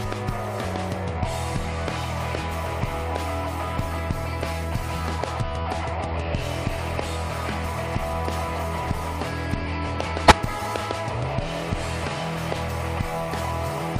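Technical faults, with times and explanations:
10.28 to 10.32 s, compressed frames skipped. Roughly 50 ms of audio never plays, so the sound jumps ahead mid-flow. Whole coded frames were lost or rejected by the decoder.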